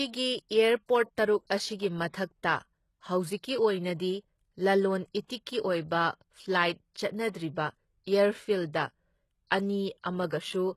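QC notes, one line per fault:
throughout: HE-AAC compression, likely. Treble is rebuilt from copied lower bands and stops at 12.3 kHz, so s sounds go gritty and lispy, which fits roughly 16 kbps.
5.26–5.30 s: pre-echo. About 34 ms of hiss smears in before a sharp attack, because the block's quantisation noise spills into the quiet moment ahead of it.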